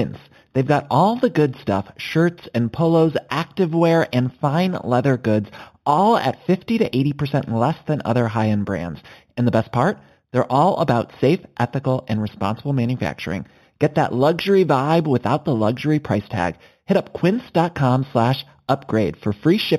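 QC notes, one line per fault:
Throughout: imaging from linear upsampling. The speech sounds like it started at 8 kHz and was raised to 44.1 kHz by straight-line interpolation between samples, which filters poorly. The real band stops at 4 kHz and its top end is dulled, while a mirrored copy of it sits between 4 and 8 kHz, about 25 dB below the speech. That copy gives sibilants a faint metallic shimmer instead of genuine air.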